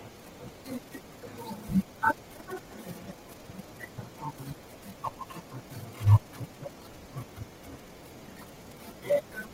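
From 3.09 to 3.14 s, the speech is hit by damaged data in a compressed stream. A stretch of the encoded bytes has been corrupted, so the decoder cannot interpret the frames it lands on, loses its place in the stream and has to hunt for the next valid frame header before it can carry on. For those roughly 50 milliseconds the speech gives way to a brief glitch, heard as a chirp, squawk, click or short hole.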